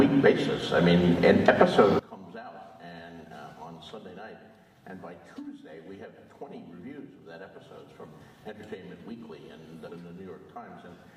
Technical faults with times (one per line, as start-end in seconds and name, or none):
1.99-11.17 one channel inverted
9.83-9.89 stream segment skipped